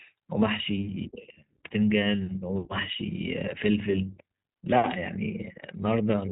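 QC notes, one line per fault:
Throughout, iLBC codec: the speech is cut off above 3.8 kHz and sounds plainly rough and synthetic, because each 20 ms frame is coded on its own, at a rate that fits about 15.2 kbps. Unlike a simple band-limit, the grainy, buzzy texture sets it apart.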